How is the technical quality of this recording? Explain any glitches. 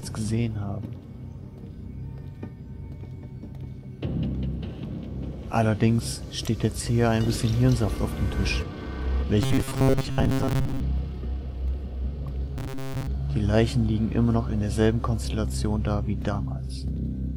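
Two stretches are marked by robotic sound from repeated short buffers, at 9.42 to 10.8 s and again at 12.58 to 13.07 s. New audio was likely reaching playback too seldom, so the software kept replaying a fragment of roughly 7.5 ms to fill the gap while most of the real material was skipped. That steady repetition imposes a fixed buzz at 134 Hz, turning the sound into a rigid, metallic drone that only loosely tracks the original.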